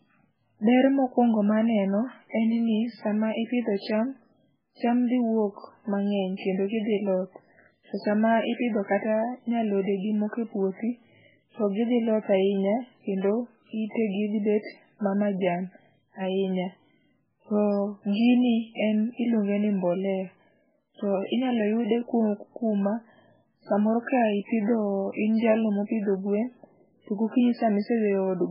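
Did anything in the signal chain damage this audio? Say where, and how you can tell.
Yes. The damage sits at the codec stage and runs through the whole speech clip: nothing survives above 5.2 kHz, and the remaining sound is watery and swirling, with s sounds turned into metallic chirps and consonant onsets smeared. The likely cause is heavy MP3 compression at a very low bitrate, around 8 kbps. The encoder drops the treble and zeroes weak frequency lines that flicker between frames. A plain low-pass filter would dull the top without that churning texture.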